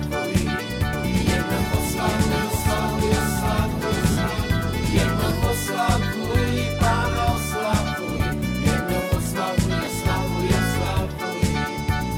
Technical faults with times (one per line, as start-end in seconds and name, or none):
0.93-5.31 doubled audio track
4.11-4.17 lost LE Audio frames
5.67 lost LE Audio frames
8.18-8.20 lost LE Audio frames
9.85-9.87 lost LE Audio frames